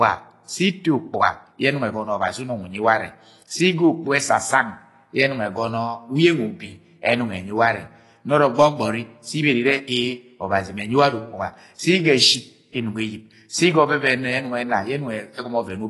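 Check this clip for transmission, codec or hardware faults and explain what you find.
One codec fault runs through the whole clip. Throughout, likely AAC compression at a low bitrate, around 32 kbps, cuts everything above 11.5 kHz and coarsely quantises the rest, leaving the speech dull and smeared.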